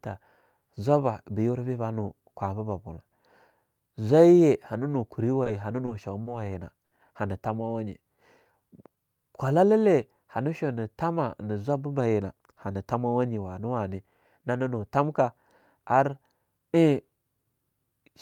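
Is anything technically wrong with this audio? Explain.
Yes. The speech has delivery-timing faults from a struggling jitter buffer.

Four short stalls from late packets occur at 5.43, 5.85, 6.23 and 6.86 s. Each time a packet arrived late and the buffer ran dry. The receiver held the last sound until it came, then resumed where it left off. Nothing is lost. The holds last 20, 20, 30 and 50 ms, so a sound hangs briefly with a faint buzz or dip.

A jitter buffer slow-down runs from 7.73 to 9.80 s. The receiver repeated pitch periods and pause fragments to rebuild its reserve. It added 112 ms over about two seconds. The speech plays at 95% speed with unchanged pitch. Sounds are slightly drawn out, with a possible mild warble.

A jitter buffer speed-up follows from 11.99 to 13.08 s. Now too much audio was queued. The receiver trimmed short pitch-period pieces repeatedly, removing roughly 150 ms. 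The speech runs at 112% speed at the same pitch and sounds hurried.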